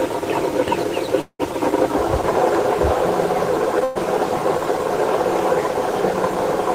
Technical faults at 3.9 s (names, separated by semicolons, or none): burst of packet loss